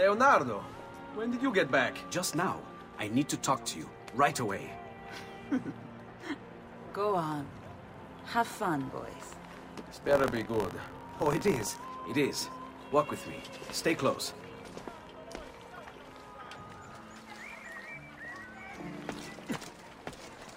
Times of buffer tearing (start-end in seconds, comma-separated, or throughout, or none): 10.01-11.89